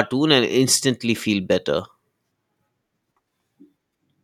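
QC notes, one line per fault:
Nothing to flag here; the speech comes across without any technical problems worth noting.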